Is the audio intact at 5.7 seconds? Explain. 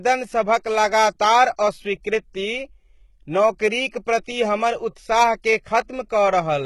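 No. At 5.7 seconds, as throughout the clip, the upper part of the speech sounds bright but synthetic: s sounds come out gritty, metallic and lispy, with treble that doesn't quite belong to the voice beneath it. The likely cause is heavy HE-AAC compression, which fits a very low bitrate of about 16 kbps. Only the lower spectrum is actually coded. The treble is rebuilt by copying lower bands upward under a coarse envelope, so harmonics fail to line up across the crossover.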